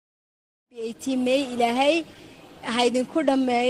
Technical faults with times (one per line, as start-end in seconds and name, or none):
none